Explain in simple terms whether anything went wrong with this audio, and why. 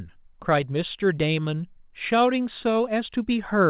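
Nothing went wrong: the speech came through a normal phone-style call connection that worked as intended, carrying the sound only up to 4 kHz as that kind of link does, and nothing else in the recording points to a fault.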